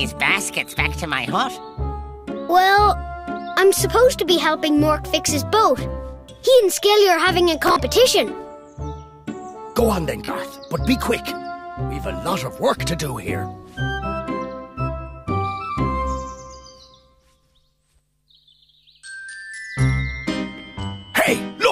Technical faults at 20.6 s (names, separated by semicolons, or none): Bluetooth stutter